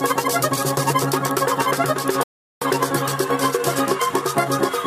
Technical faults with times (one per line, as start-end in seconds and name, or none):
2.23-2.62 rebuffering stall